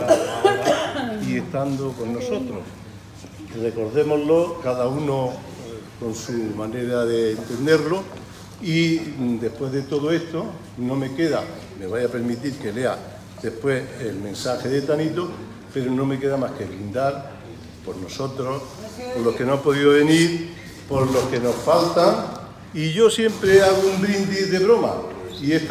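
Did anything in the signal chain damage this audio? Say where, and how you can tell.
No, nothing in the signal chain audibly damaged this audio. Listening across the whole clip, I can't point to any moment where the sound is disturbed by a fault at any stage.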